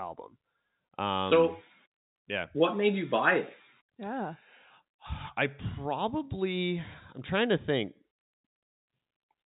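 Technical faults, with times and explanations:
No technical faults are audible in this speech clip.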